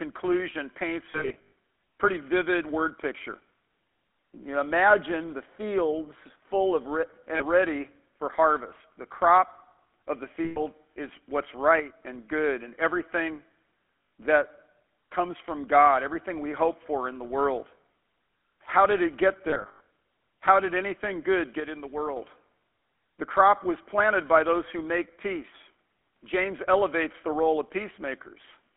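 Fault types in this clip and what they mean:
GSM full-rate codec: The speech passes through the original GSM phone codec, at a rate that fits 13 kbps. It rebuilds the voice from a vocal tract model driven by sparse pulses. Sound is kept between 250 Hz and 3.4 kHz, and a buzzy, gravelly roughness is plainly audible throughout.
lost GSM frames: Missing frames are filled by repeating the last good frame at falling level. Each gap rings roughly and metallically. The worst two come just before "pretty vivid word picture" and after "did it get", each scattered over about 0.4 s. Three shorter gaps fall between them.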